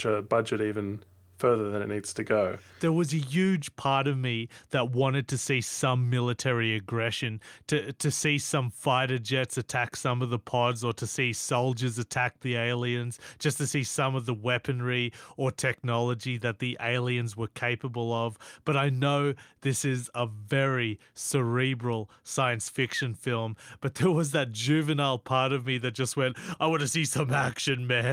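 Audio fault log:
No faults detected in this speech recording.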